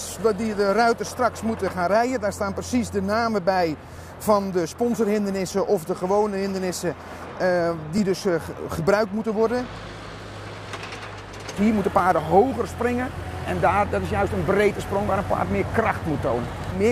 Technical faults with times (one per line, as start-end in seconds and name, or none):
3.96 overlapping chunks
7.98 overlapping chunks
11.99 overlapping chunks
16.00 overlapping chunks